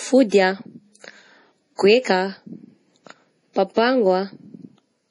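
A speech recording with a watery, swirling texture running from start to finish, where s sounds turn into metallic chirps, consonant attacks smear, and nothing is heard above about 10.6 kHz. The likely cause is heavy MP3 compression, consistent with a very low bitrate around 32 kbps: starved of bits, the encoder cuts off the treble and drops quieter frequency components that flicker in and out between frames, producing that swirl and chirp.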